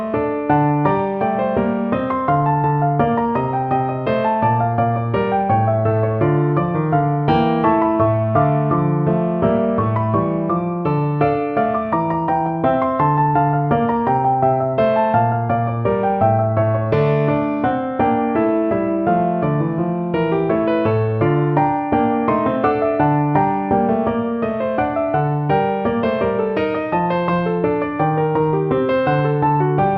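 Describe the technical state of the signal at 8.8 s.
At 8.8 s the signal is intact, with no dropout, distortion or other fault present at that moment.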